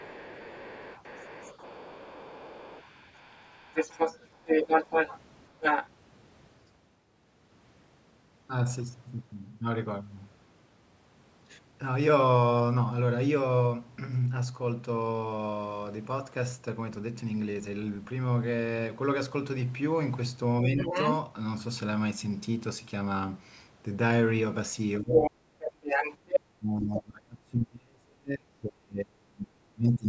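A speech recording from a call in which the other side's voice leaking through is heard from 0.0 to 5.89 s, again at 20.78 to 21.15 s, from 25.13 to 26.4 s, and briefly at 26.96 to 27.0 s. This is likely loudspeaker echo that the echo canceller failed to subtract from the microphone. The second voice sits a few dB below the talker in the first two stretches, rises slightly above the talker around 25 to 26 s, and is faint in the last fragment. On a spectrogram it shows as a second set of harmonic striations overlapping the talker's. Because the call's microphone processing band-limits the signal, both voices stop at 8 kHz. From 25.0 s to the end the talker's speech is suppressed in double talk. With both sides speaking together, the canceller likely could not tell the talker from the echo and attenuated both. In total about 4 s of the talker's speech dips or drops out in pieces, falling by as much as roughly 35 dB. 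On the waveform the envelope collapses in chunks, and the spectrogram shows gaps and thinned-out upper harmonics in the talker's energy during these dips.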